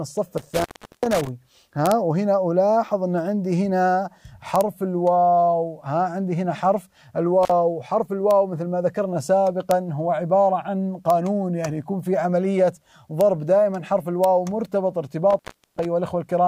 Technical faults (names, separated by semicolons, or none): intermittent contact; integer overflow